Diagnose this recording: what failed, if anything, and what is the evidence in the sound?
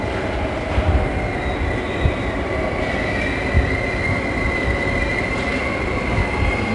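The codec stage failed: 4-bit ADPCM compression runs throughout. Gritty hiss rides on every loud passage and drops away in quiet ones, unlike a steady noise floor. Nothing sounds above 10.8 kHz, which fits about 89 kbps at a reduced sample rate.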